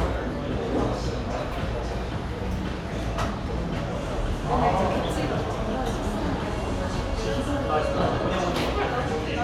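There are no technical faults to describe in time order anywhere in this sound.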